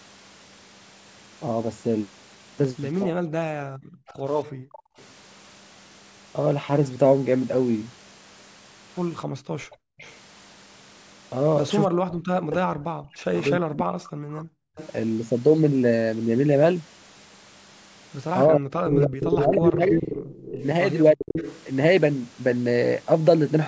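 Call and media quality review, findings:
Speech suppressed in double talk, 3.04–3.35 s, 11.87–14.39 s, 18.47–21.37 s: echo canceller likely could not separate near talker from loudspeaker echo during overlap. Voice ducked roughly 30–40 dB.

Background gated by the echo canceller, 3.63–4.97 s, 9.26–9.98 s, 14.67–14.76 s: suppressor clamps microphone while loudspeaker plays. Room tone drops about 40 dB, then returns on release.

Echo leak, 4.08–5.04 s, 9.71–10.15 s, 13.37–14.88 s, 18.85–21.62 s: loudspeaker pickup likely passed by canceller. Delayed copy at 279, 295, 308, 327 ms. Faint early, near speech level from 18.85 s.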